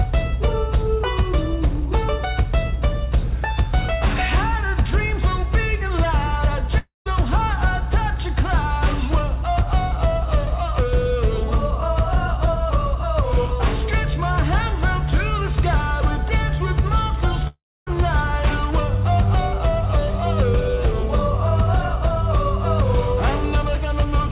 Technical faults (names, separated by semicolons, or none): long network dropout